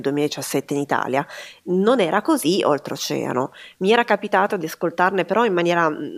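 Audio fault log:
No faults detected.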